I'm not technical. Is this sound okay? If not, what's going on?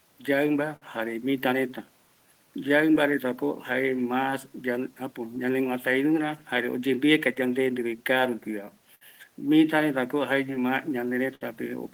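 No. The speech has several small timing problems.

Clock drift between sender and receiver runs through the whole clip. The device sending the audio keeps time about five percent slower than the device playing it. So the player keeps running short of sound and has to make up the difference. You won't hear this as one clear event. It shows up as the small hiccups described below.

Repeated timing corrections are how the player copes. From 0.34 s to 11.28 s it keeps adding tiny bits of sound to stay in step. Together these add about 0.4 seconds. The talking therefore plays at about 97 percent of normal pace. It may sound slightly slow or uneven in rhythm, with occasional faint stumbles.

A short stall from a late packet happens from 0.76 s to 0.84 s. A piece of audio arrived late. While waiting, the player held the last sound for 53 milliseconds. Nothing is lost. You may hear one sound stretched a little too long, perhaps with a faint buzz or a small dip.

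Scattered short gaps appear in two stretches. Between 2.95 s and 5.38 s there are about three, each only a few milliseconds long. Between 7.35 s and 11.43 s there are about seven, the longest around 70 milliseconds. Each time, the player filled the hole by continuing the previous sound. These can come across as brief ticks, smears or hiccups.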